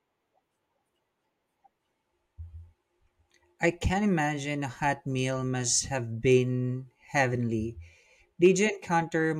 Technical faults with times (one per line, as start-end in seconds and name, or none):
none